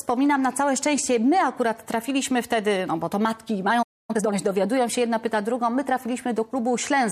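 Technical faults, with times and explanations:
3.82–4.11 s, playback stall: the sound breaks off mid-flow and the output falls silent for about 0.26 s before resuming. The likely cause is the player running out of buffered data, or its audio thread being held up, so nothing reached the output.
4.11–4.37 s, time-compressed catch-up: right after the gap, the audio runs at twice its normal rate for about a quarter of a second. The player trims the built-up backlog by cutting out short pieces and cross-fading the joins, so the sound is hurried at unchanged pitch.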